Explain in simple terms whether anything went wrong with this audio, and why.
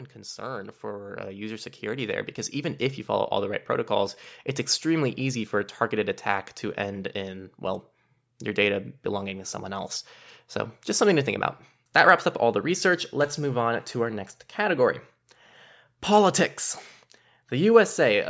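From 0.13 to 3.35 s, the voice and the background noise grow louder together, swelling steadily over about three seconds. This is automatic gain rising: the call's automatic level control decided the input was too quiet and gradually turned it up.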